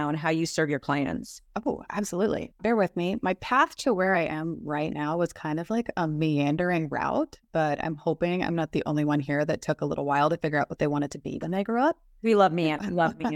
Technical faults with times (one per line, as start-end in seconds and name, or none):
none